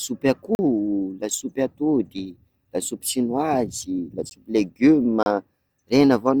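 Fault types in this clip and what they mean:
Block of digital silence: the speech drops to silence with no fade, then returns abruptly. Gaps at 0.55 to 0.59 s and 5.23 to 5.26 s sound like short holes. A 15 ms gap at 4.30 s is more of a tick.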